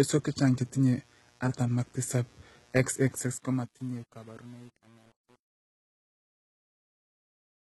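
A speech clip with three technical faults. A steady, raspy mains buzz runs through the whole recording. It sits roughly 35 dB below the speech. Its base is 60 Hz, and harmonics stack up well into the kilohertz range. That rasp comes from sharp switching spikes, twice per mains cycle. A dimmer, a rectifier or a missing shield lets them into the signal path. Because they are spikes rather than a smooth hum, the buzz sounds edgy.

The treble is present but false. Sibilants sound gritty and metallic, and nothing is heard above 11.8 kHz. Heavy HE-AAC compression is the likely cause. The top band is not coded directly. It is copied up from lower bands and shaped coarsely, so harmonics fail to line up across the crossover. The damage fits a very low bitrate, around 16 kbps.

From about 3 s the speech fades out to the end at 7.72 s. That fade is spoiled by truncation distortion on a fade, starting at 3.09 s. 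It is worst from 3.38 s to the end. As the level drops, the waveform collapses into a few coarse steps. The tail turns grainy. This fits a fade computed with about 8 bits and no dither.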